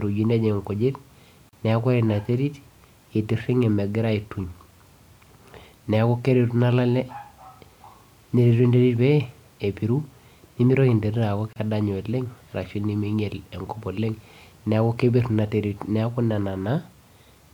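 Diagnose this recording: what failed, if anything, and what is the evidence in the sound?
The failure is at the codec stage: the speech was encoded in separate pieces, apparently on a 10-second cycle, and joined without trimming each run's start-up delay and final-frame padding. The result is a gap at a join of encoded pieces: a brief silence cuts into continuous speech at 1.49 s (about 37 ms) and again at 11.53 s (about 31 ms). Each has smeared edges, and the sound resumes exactly where it stopped.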